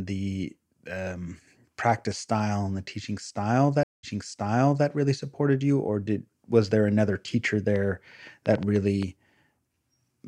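At 3.83 s the speech cuts to silence for about 0.2 s, the signature of a stream reconnect. The connection dropped, the player re-established it and started a new decoder partway through the stream. When sound returns, it picks up 0.84 s earlier than where it broke off, so a short stretch of speech is heard twice. This fits a server resending a burst of buffered data on reconnection. The disturbance settles by 4.87 s.

From 7.76 s to 9.04 s a train of clicks sits over the speech, about seven sharp, similar pulses at an average of 4.7 per second with uneven spacing between them. They peak around 5 dB above the speech. The likely cause is interference from nearby equipment or a faulty connection or power supply injecting the same pulse repeatedly.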